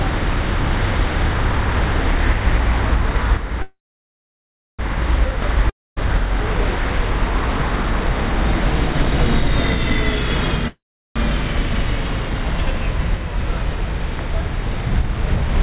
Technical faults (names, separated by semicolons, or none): call audio freeze; long network dropout